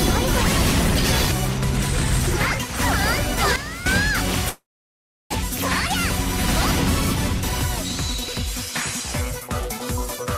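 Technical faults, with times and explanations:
3.56–3.86 s, sudden gain jump: sound and background noise drop together by about 12 dB for 0.3 s, likely a gain change applied without a ramp.
4.49–5.35 s, long network dropout: a fading buzz gives way to silence, and 0.6 s is lost, likely from stalled packets, with playback resuming about 0.2 s delayed.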